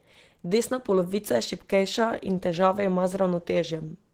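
Opus compression runs through the whole speech clip, with plainly audible damage. Speech sounds muffled and hoarse, with a rough, grainy edge. This is likely the encoder's hybrid speech mode at a very low rate, which fits around 16 kbps, starving the bands of detail.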